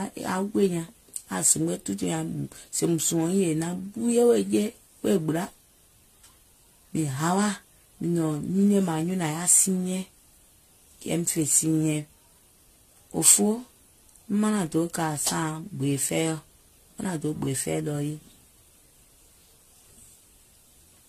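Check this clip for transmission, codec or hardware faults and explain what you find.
There's one problem, and it runs through the whole recording: generation loss. The speech sounds swirly, hollow and smeared, consonant attacks blur, and nothing comes through above 14 kHz. That's likely from repeated lossy coding, around four passes through AAC-LC at settings that fit roughly 64 kbit/s. Each re-encode quantises again on a shifted frame grid, so the noise and spectral gaps stack up and it sounds worse than a single pass at that rate would.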